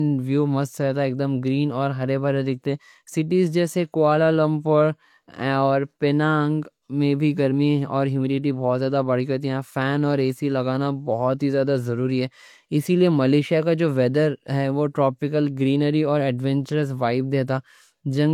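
Low-bitrate audio saved at a high bitrate runs throughout this speech clip. The coding artefacts sound like a low-rate HE-AAC encode, around 40 kbit/s, that was likely re-encoded as MP3 near 256 kbit/s, which added file size but restored nothing the first codec discarded.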